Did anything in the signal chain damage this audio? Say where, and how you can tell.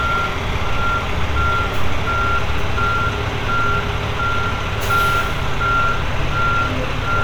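No, nothing along the way seems to have harmed these sounds, and there's no point where the signal chain gives itself away.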